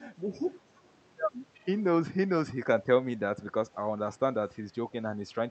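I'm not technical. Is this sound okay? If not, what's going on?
No, not quite. There's an echo leak: faint copies of the speech come back about a third of a second late, around 0.77 to 0.89 s and again at 1.54 to 1.67 s. Most likely the other end's loudspeaker bled into its microphone.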